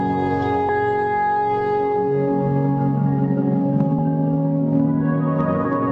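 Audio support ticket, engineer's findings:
Compressed frames skipped at 0.69, 3.98 and 5.65 s. Audio jumps ahead about a fifth of a second, several 32 ms frames. Decoder or file.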